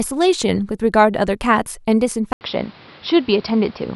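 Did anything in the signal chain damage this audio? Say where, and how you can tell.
Yes. At 2.33 s the speech drops out for about 80 ms, then returns dull and boxy through to the end of the clip, with nothing above 5.6 kHz and new background noise about 30 dB below the speech, while the level stays about the same. At the driver or device stage, the likely cause is the input switched to a poorer device, such as a second microphone or a headset's call profile with its narrower band and its own noise floor.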